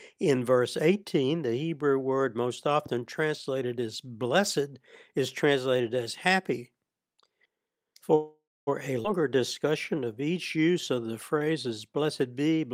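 Call audio freeze, 8.15 to 8.69 s: the speech stops and the last sound is stretched into a fading buzz that dies to silence for about the final 250 ms. This is likely a stall in packet delivery that emptied the jitter buffer, leaving the receiver to extend what it had. When audio returns it picks up where it stopped, so roughly half a second of gap is inserted with nothing lost.

Skip ahead, 9.03 to 9.06 s: playback jumps forward almost seamlessly, with only a tiny bridging fill. Around a fifth of a second of speech is gone, either dropped in transit or discarded when the buffer overflowed while later audio was already queued. The two sides of the cut are joined nearly directly, so the speech lurches abruptly rather than pausing.

Jitter buffer slow-down, 9.21 to 11.45 s: the speech drags at about 92 % of normal speed while keeping its pitch, with drawn-out sounds. The buffer was rebuilding its reserve, so the receiver repeated individual pitch periods and slices of pauses many times over. 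Across this stretch it adds 186 ms, which is what makes the delivery sound sluggish.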